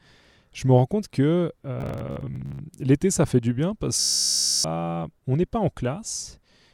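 Speech with Bluetooth stutter in two places. From 1.81 to 2.59 s, brief dropouts scattered across about 0.78 s, the longest a 58 ms run, total roughly 0.39 s lost. From 4.00 to 4.64 s the loss is nearly continuous, about 0.64 s. The receiver replays its last short buffer until fresh data arrives, giving a buzzing, machine-gun repeat. On a waveform, identical short segments tile end to end. A spectrogram shows a frozen, vertically striped texture before the speech jumps forward.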